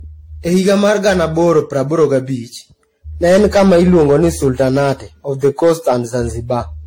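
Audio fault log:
Throughout: hard clipping. The speech is driven about 8 dB past full scale, flattening roughly 3% of samples, so peaks crackle.
Throughout: generation loss. The audio sounds swirly, hollow and smeared, with blurred attacks and nothing above 16.6 kHz, likely from about seven passes through a lossy codec such as AAC-LC near 64 kbit/s.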